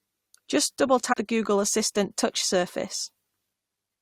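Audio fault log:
1.12–1.14 s, compressed frames skipped: a run of compressed frames never reached playback, either absent from the file or rejected by the decoder as corrupt. The speech therefore leaps forward by about a tenth of a second, losing that stretch outright with no gap of silence left behind, and the speech continues abruptly from a later point.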